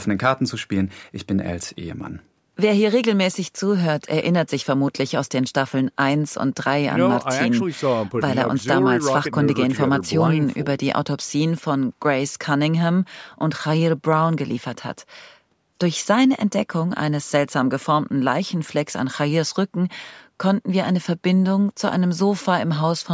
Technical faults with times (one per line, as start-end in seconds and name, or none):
none